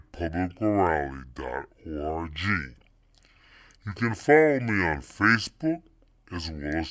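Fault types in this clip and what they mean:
Wrong sample rate: throughout, the speech plays at two-thirds speed and about 7 semitones low, consistent with 24 kHz audio played at 16 kHz without conversion.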